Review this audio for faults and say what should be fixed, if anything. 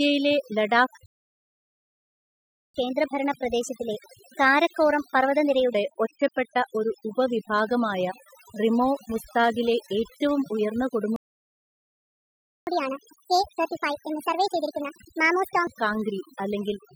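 Overdone noise removal runs through the whole clip. Quiet speech detail is stripped away with the noise. The background twinkles. Use a gentler reduction setting.

A playback stall silences the speech from 1.06 to 2.74 s, about 1.7 s. A second stall, from 11.16 to 12.67 s, follows "റിമോ മുസ്താഗിലെ ഏറ്റവും ഉയർന്ന". The player likely ran short of data. A larger playback buffer would prevent this.

Catch-up at higher speed follows each stall. From 2.74 to 5.74 s, speech plays 1.15 times fast, about two semitones high. From 12.67 to 15.67 s, it plays 1.5 times fast, roughly seven semitones high, before "കാംഗ്രി അല്ലെങ്കിൽ". Recover lost time without resampling, or drop the backlog instead.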